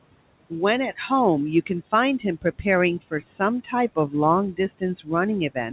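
Speech with noise suppressor artifacts throughout: the room noise, sitting about 18 dB below the voice, is pulled down by about 21 dB in the pauses and swells back under each phrase. Unlike a gate, which snaps fully shut, this pumping follows the speech level band by band. Between 2.42 and 2.66 s comes speech cut by the noise suppressor: roughly a tenth of a second of the voice is treated as noise and drops by up to about 15 dB, so it sounds swallowed. This differs from a dropout because the sound fades rather than going silent. The band stops at 4 kHz, which fits a narrowband G.711 call path.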